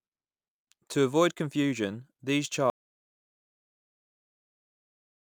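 At 2.70 s the speech cuts off abruptly and the rest of the clip is an audio dropout to silence, most likely from the input being lost while recording carried on writing silence. Unlike a fade or noise gate, nothing tapers and no room tone remains.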